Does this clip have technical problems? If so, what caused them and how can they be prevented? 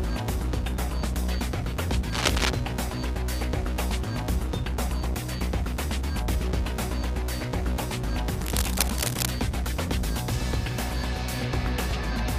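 Yes. Cable scratch noise occurs at 2.12–2.50 s, about as loud as the sound, and at 8.41–9.31 s, slightly quieter. A worn, shifting cable or connector is the likely cause, making contact resistance flicker. Spectrograms show ragged broadband smears and waveforms show dense spiky bursts. Replacing worn leads and securing cables prevents it.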